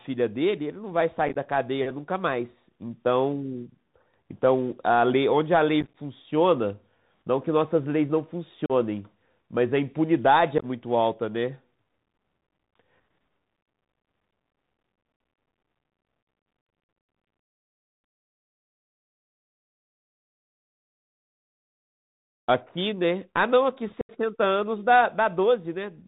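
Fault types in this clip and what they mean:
Bluetooth CVSD headset codec: The whole recording carries the narrowband character of a CVSD headset link, consistent with 64 kbps. The coder sends one up-or-down bit per sample and adapts its step size, so the band stops at 4 kHz and the speech sounds muffled. Loud, bright passages outrun the step and distort, s sounds come out scratchy, and a granular hiss sits under the speech throughout. The damage is plainly audible.
Unconcealed Bluetooth headset packet loss: Short stretches of voice data between headset and phone are missing and replaced with silence, leaving abrupt holes that can click at their edges. It occurs at 1.28–1.36 s, 5.81–5.95 s, 8.66–8.72 s, 10.58–10.66 s, 15.18 s and 24.01–24.11 s. The gaps at 1.28, 5.81 and 10.58 s are scattered dropouts that sound chopped and crackly. The speech comes back briefly quieter after each hole, and the largest loss is about 79 ms at 24.01 s.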